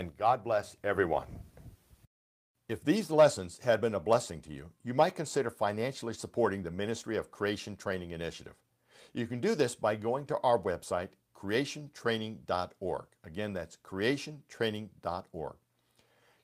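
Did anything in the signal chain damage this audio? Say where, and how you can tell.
No, nothing in the signal chain audibly damaged this speech.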